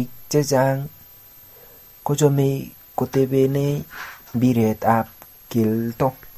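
Running under the speech for the whole clip is a switching supply whistle: a thin, high tone sitting up around 12.2 to 12.6 kHz. It's roughly 30 dB below the speech. It's a power supply switching in an audible burst mode, or two supplies beating, and that noise leaking into the audio path.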